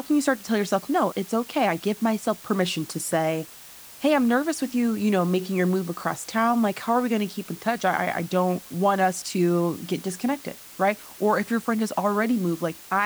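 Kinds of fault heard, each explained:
Low bit depth with dither: the speech sits on a steady, even hiss the whole way through, only roughly 20 dB below it, which fits something like 6 bits. Dither turns the rounding error into smooth noise, so there's no gritty distortion, just that constant hiss.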